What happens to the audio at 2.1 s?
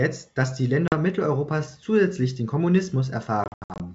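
Nothing goes wrong at 2.1 s: the speech continues intact through that moment, carried by ordinary G.722 wideband telephone coding with no audible fault.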